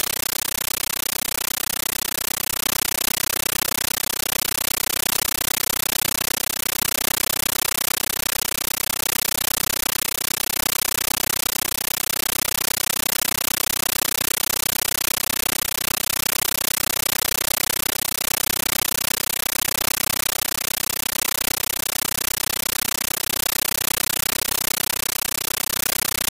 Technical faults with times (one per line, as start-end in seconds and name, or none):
0.00-26.32 compressed stream played as audio